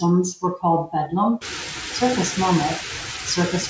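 Right from the start the noise suppressor artifacts are there: the background is pulled down by only about 4 dB, and what's left of it sinks between the words and rises under them as the suppressor works frame by frame.

Then the suppressor starts mistaking parts of the speech for noise. Between 0.36 and 0.63 s, 0.87 and 1.12 s, and 1.38 and 1.48 s, around a tenth of a second of speech in each stretch gets turned down with the background, by about 15, 9 and 17 dB at worst. Those bits sound swallowed or oddly faint. Around 1.5 s the room noise jumps by about 20 dB and ends up only about 8 dB under the speech. Nothing comes through above 8 kHz, which fits a wideband call codec.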